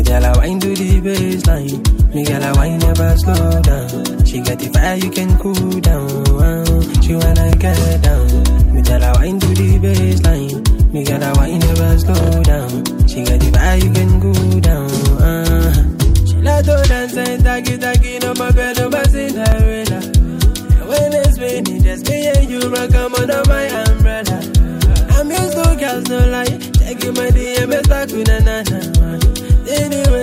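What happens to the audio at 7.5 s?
At 7.53 to 7.56 s there is an overlap between stream segments: two of the 6-second segments carry overlapping time stamps, so the player discards about 29 ms of audio that was never duplicated. The waveform jumps across the gap, heard as a brief click or skip.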